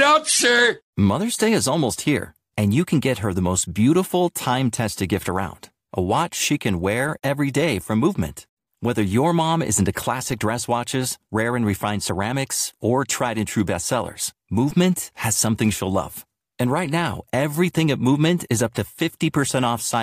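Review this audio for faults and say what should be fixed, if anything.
A DC step at 14.71 s shifts the waveform's zero line by about -27 dBFS, giving a low thump that a 20 Hz high-pass then bleeds away. Prevent it by settling converter calibration and input switching before recording, and keep a DC-blocking high-pass in the chain.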